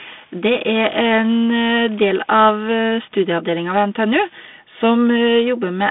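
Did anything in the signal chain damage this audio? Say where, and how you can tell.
No, nothing in the signal chain stood out as damaging this speech on listening.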